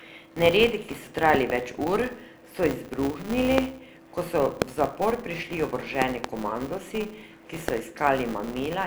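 From start to finish the speech carries a filter restarted on every block: the filter drops its state at each block boundary and begins from silence, so a tiny transient opens every block. The result is a buzz at 200 Hz that rises and falls with the speech level, visible on a spectrogram as a faint comb of harmonics at 200 Hz spacing.

Loud pops, likely from a plug, switch, static discharge or driver glitch, land on top of the speech, which continues underneath. A double pop falls at 1.35 to 1.52 s, after "ki so" and before "več ur so izbruhnili". Single pops follow at 3.58 s, after "več ur so izbruhnili" and before "ko so", and at 4.62 s. Another double pop comes at 6.02 to 6.27 s, after "zapor prišli", and a final single at 7.68 s. Each peaks at about 20 dB above the speech. On a waveform they appear as tall isolated spikes, and on a spectrogram as thin vertical broadband stripes.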